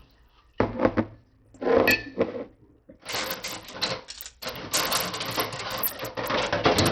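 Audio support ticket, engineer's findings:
Bluetooth SBC compression, throughout. Treble flickering in and out, gritty granular noise and aliasing riding on the sound, nothing above 17.5 kHz. Likely SBC link at a starved bit pool, consistent with about 64 kbps: upper sub-bands get few or no bits, remaining bands coarsely quantised. Heavy damage.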